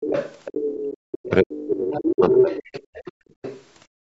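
It's a short speech clip from a call, with the lowest bass trimmed by the call's mic processing, and it has a messy echo canceller. The other side's voice leaks through at 0.0–0.97, 1.57–1.67, 1.94–2.11, 2.29–3.12 and 3.3–3.64 s. It's likely loudspeaker playback the canceller didn't fully remove, ranging from well under the talker to roughly as loud by 2.29 s. From 1.06 to 2.8 s the talker's speech is suppressed in double talk, dipping and breaking up by as much as about 35 dB. That's likely because the canceller turned everything down while both sides overlapped. The background is also gated by the echo canceller, dropping about 29 dB at 3.12–3.39 s and about 31 dB from 3.87 s to the end, as the mic gets clamped during playback.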